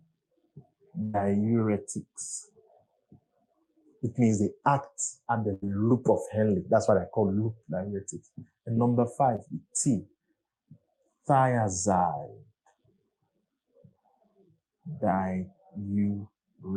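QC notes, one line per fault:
1.03–1.16 s and 5.54–5.64 s, burst of packet loss: a run of packets went missing, about 100 ms the first time and 80 ms the second. The receiver stretched the last bit of sound and faded it down across each hole, so you get a brief held, dimming tail before the audio picks up further along with that stretch gone.
9.36–9.40 s, short concealed packet loss: roughly 20 ms never made it to the decoder in time, so the receiver patched it by extending the preceding sound and blending back in. It comes across as a quick smear or wobble.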